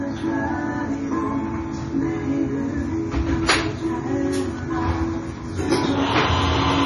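Throughout the clip, likely MP3 compression at a very low bitrate, which fits about 32 kbps, starves the encoder of bits, so it drops everything above 11.3 kHz and switches weak components on and off. The heavily damaged sound turns watery and swirly, with metallic chirps and smeared attacks.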